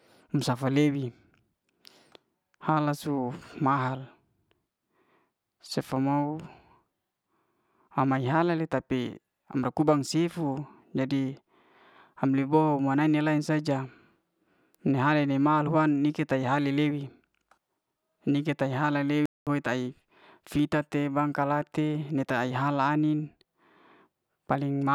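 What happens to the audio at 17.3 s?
Nothing goes wrong at 17.3 s; the speech carries on intact through that moment with no dropout, distortion or other fault.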